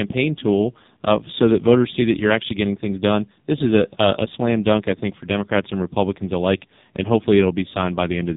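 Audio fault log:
Throughout: AMR narrowband mobile codec. Nothing passes above 3.8 kHz, and heavy coding damage leaves the speech buzzy and synthetic, which fits a very low AMR-NB mode near 5 kbps. A spectrogram shows a hard ceiling at 3.8 kHz and smeared, blocky harmonics.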